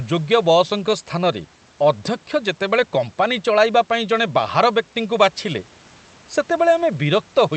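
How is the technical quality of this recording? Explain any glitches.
Nothing here counts as a glitch: the speech comes through the call's Opus link with its usual narrowed top end and a faint room noise sitting about 33 dB below it, all of which is normal for this kind of recording.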